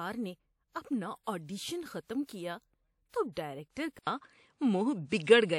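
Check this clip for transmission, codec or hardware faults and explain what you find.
Two kinds of fault are audible in this speech clip: pre-echo on two attacks and a change of input partway through.

Pre-echo appears at 2.25–2.29 s and 3.09–3.14 s, lasting 42 and 44 ms. The codec spread quantisation noise across each transform block, so noise meant for a sharp onset leaks into the quiet gap before it, heard as brief hiss smearing the attack.

Input switched to a poorer device is the likely cause of the change at 3.99 s, which lasts to the end. An 80 ms silence marks the switch, then nothing remains above 9.7 kHz, the level shifts by around 5 dB, and new background noise sits around 50 dB below the speech, making it duller.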